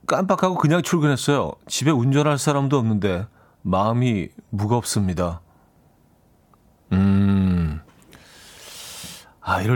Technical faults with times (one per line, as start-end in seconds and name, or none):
none